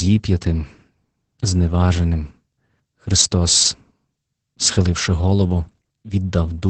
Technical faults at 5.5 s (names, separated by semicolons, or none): Opus voice compression